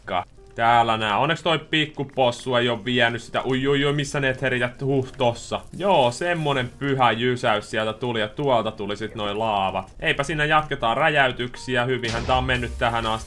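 From 7.20 to 12.10 s, regular ticks at 10 Hz point to a resampler restarted on every block. Each 100 ms block was converted separately, consistent with a 48 kHz to 24 kHz rate change, so every block edge lacked its true neighbouring samples and carries a small error.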